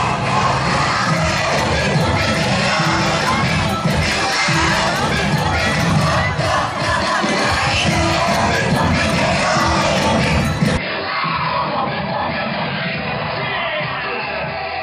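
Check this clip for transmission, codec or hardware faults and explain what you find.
One fault is present. From 10.77 s to the end, the sound turns dull and boxy, with nothing above 5 kHz, the level about 5 dB lower and a new faint noise floor. The likely cause is an input switched to a poorer device: the narrower band and different noise come from another microphone or a headset's call profile. Because tone, level and background change together at one instant with no gap, it differs from a codec simply narrowing its bandwidth.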